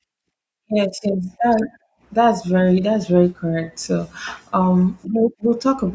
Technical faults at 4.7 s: none

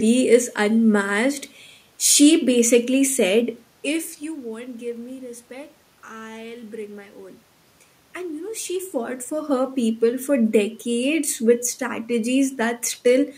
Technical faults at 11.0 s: none

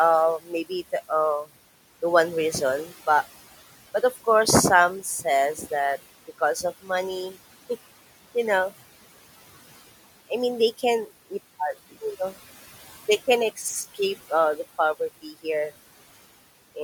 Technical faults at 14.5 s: noise suppressor artifacts

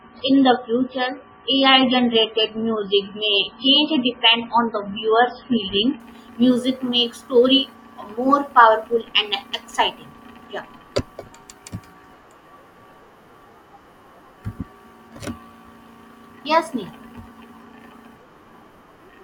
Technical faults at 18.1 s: none

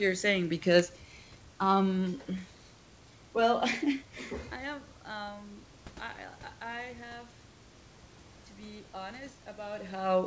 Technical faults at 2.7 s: none

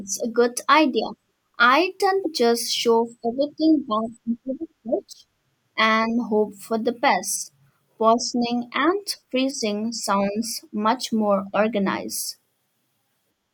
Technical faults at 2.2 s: damaged data in a compressed stream

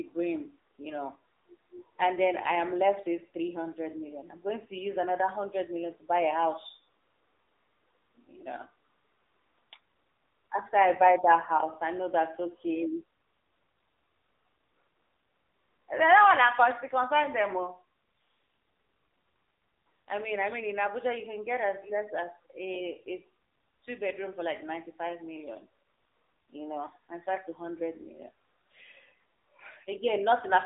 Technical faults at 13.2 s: AMR narrowband mobile codec

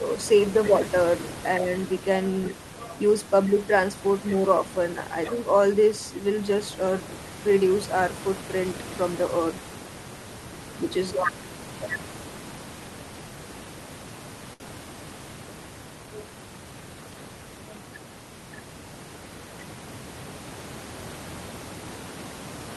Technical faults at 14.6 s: short stall from a late packet

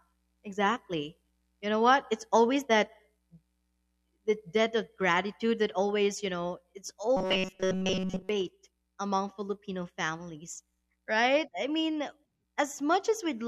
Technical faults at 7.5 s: robotic sound from repeated short buffers

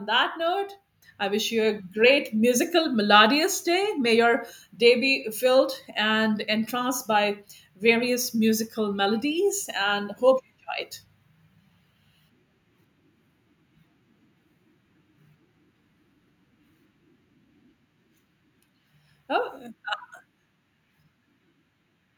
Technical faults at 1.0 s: microphone volume stepped up

